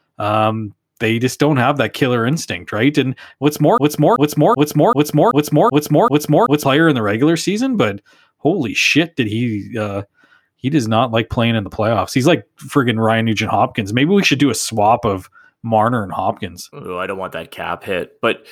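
From 3.78 to 6.65 s, a broken-record loop: one 0.38 s fragment repeats seven times, exact and undecaying unlike echo, likely a stalled stream.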